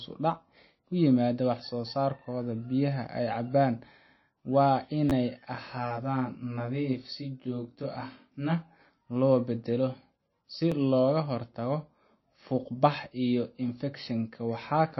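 Throughout, the sound is dull and watery, with nothing audible above 5.8 kHz and a swirling, chirpy texture on sibilants. This is likely MP3 compression at a starved bitrate, somewhere near 25 kbps, where the encoder drops the treble and flickers weak frequency lines between frames.

From 5.10 to 5.12 s a repeated buffer occurs. An 11.61 ms slice plays two extra times with hard joins, which fits a 512-sample buffer being replayed when fresh audio arrived late. It is heard as a brief buzzy stutter.

From 5.55 to 8.81 s, channel delay causes comb filtering. One channel lags by roughly 20 ms and the two are summed, cancelling shared content at evenly spaced frequencies starting in the low tens of hertz. The result is a rough, slightly doubled sound.

At 10.72 s the repeated buffer returns. The same 11.61 ms block plays once more, producing a short click-like stutter at the join.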